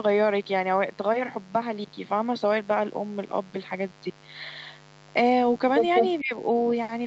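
A mains buzz runs under the speech from start to finish: a steady, raspy tone built on 50 Hz, at about 25 dB below the speech. Switching spikes twice per mains cycle put in harmonics stacked well up the spectrum, up to the 8 kHz limit of the call path.

From 5.95 to 6.06 s an echo leak appears: a copy of the speech returns about 200 ms late, roughly as loud as the original. This is likely a far-end loudspeaker being picked up again by its microphone, with that side's echo canceller failing to remove it.

From 6.21 to 6.34 s the speech is suppressed in double talk. The level falls by up to about 25 dB over roughly 150 ms, so the sound dips and partly drops out. The cause is likely an echo canceller confusing overlapping talk with echo and attenuating both.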